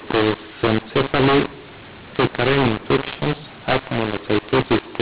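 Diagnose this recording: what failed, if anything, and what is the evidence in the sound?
The speech has been hit by a mu-law and A-law mix-up at the codec stage, all the way through. It was written as mu-law but decoded as A-law, so levels get scrambled: speech turns harsh and gritty, and the pauses fill with noise instead of dropping to silence. The 4 kHz telephone band sounds right.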